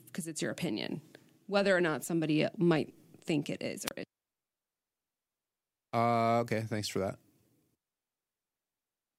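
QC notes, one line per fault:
3.86–3.91 s, wireless microphone squelch dropout: after "might think it is", a fading radio link raises hiss, then squelch mutes for 25 ms, leaving a near-silent hole and a flat waveform gap.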